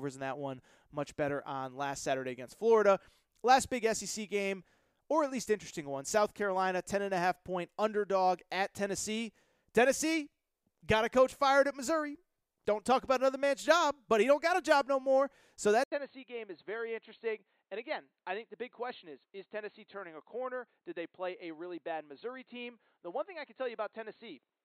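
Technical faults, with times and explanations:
15.84 to 24.65 s, input switched to a poorer device: an 80 ms silence, then the speech turns dull and boxy, roughly 10 dB quieter. Nothing remains above 4.3 kHz, and a faint new noise floor appears. The likely cause is a narrower-band microphone taking over.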